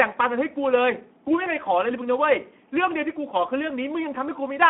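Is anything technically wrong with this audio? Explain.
Yes. Throughout, Speex codec damage is plainly audible. The speech sounds hoarse and noisy, which fits roughly 11 kbps. It is confined to a telephone band, 200 Hz to 3.4 kHz, with nothing above 3.8 kHz.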